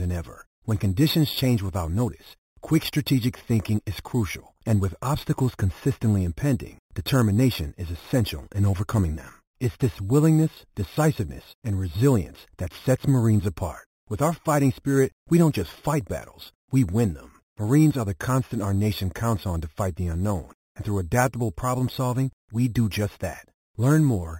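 Throughout, the speech was upsampled by holding each sample with no smoothing filter, which points to an original 8 kHz rate. This causes imaging from sample-and-hold upsampling: mirrored copies fill 4 to 8 kHz, about 20 dB down, giving a metallic fizz that tracks the speech.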